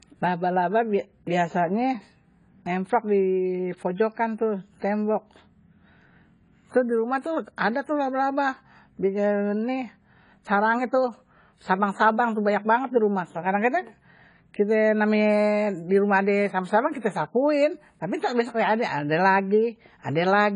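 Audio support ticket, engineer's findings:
Dull speech throughout, nothing above 10 kHz, warbly fizz on sibilants. Likely AAC compression, AAC-LC starved of bits (fits about 24 kbps), which zeroes or noise-fills weak bands. A plain low-pass would cut cleanly; this smears and shifts between frames.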